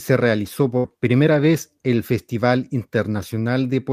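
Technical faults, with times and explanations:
0.77–0.86 s, burst of packet loss: several consecutive packets arrived too late or not at all, so the receiver stretched the last speech it had for 65 ms, fading it down, then resumed with 60 ms of speech skipped. The result is a brief smeared stall and a jump.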